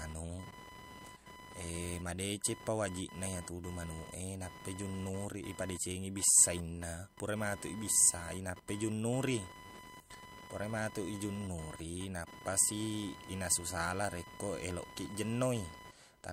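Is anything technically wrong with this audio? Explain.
Yes. Throughout the speech there is computer activity noise, a whining buzz near 1 kHz at roughly 15 dB below the voice. Processor load disturbs the shared audio ground. On a spectrogram it shows as a line near 1 kHz with harmonics that comes and goes with the computer's activity, unrelated to the speech.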